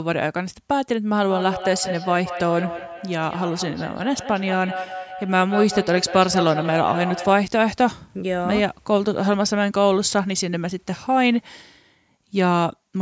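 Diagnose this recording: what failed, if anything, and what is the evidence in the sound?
Feedback echo between two devices, at the call-processing stage, runs from 1.23 s to 7.5 s. The sound returns at a fixed spacing of roughly a fifth of a second, with the strongest repeat about 9 dB below the direct speech. Two devices in the same room share the call. One plays back the other's microphone feed, and that microphone picks it up again. Each echo canceller removes only its own device's output, so the loop survives. On a waveform, smaller copies trail each burst at regular intervals. A spectrogram shows the same speech patterns repeated and shifted in time, with nothing above 8 kHz from the call's microphone processing.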